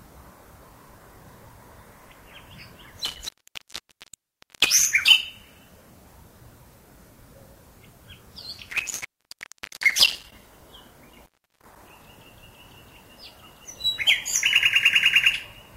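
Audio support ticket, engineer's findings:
Intermittent contact at 3.05–4.85 s (dropout about 1.34 s), 8.53–10.32 s (about 0.77 s) and 11.10–11.76 s (about 0.34 s). Signal cuts out with crackle at each break and make. Probable loose plug or cable with a conductor opening briefly. Waveform shows abrupt drops to near-flat with spiky edges. Spectrogram shows full-height vertical clicks bracketing dark gaps with faint broadband hiss.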